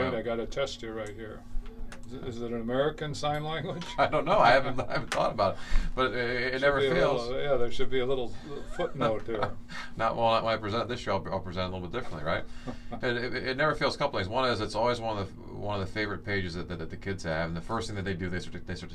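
No technical faults can be heard in this audio. There is nothing to mark at any point along its timeline.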